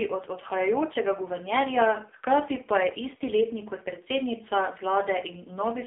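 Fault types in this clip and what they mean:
AMR narrowband mobile codec: The speech was squeezed through the AMR-NB mobile codec at a very low bitrate, which fits its 5.9 kbps mode, so each 20 ms frame is rebuilt from a coarse vocal-tract model and a handful of excitation pulses. Nothing passes above 3.7 kHz and little below 250 Hz, leaving a thin, boxed-in telephone band, and the heavy coding makes the speech sound buzzy and synthetic throughout.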